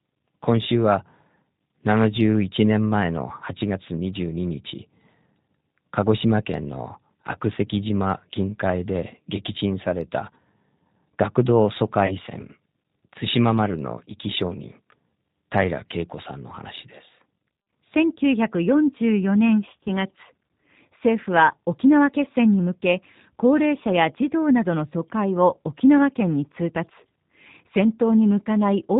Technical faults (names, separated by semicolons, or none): G.729 codec; VoIP packet loss concealed by the speech codec